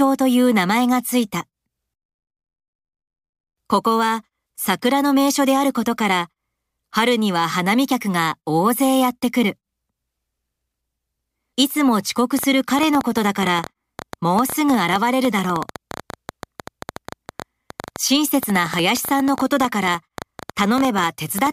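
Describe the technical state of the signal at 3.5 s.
At 3.5 s the speech signal is intact, with no audible technical fault at that moment.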